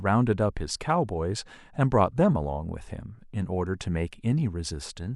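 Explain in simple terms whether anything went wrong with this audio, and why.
Nothing went wrong with this speech recording; there are no audible faults to point to.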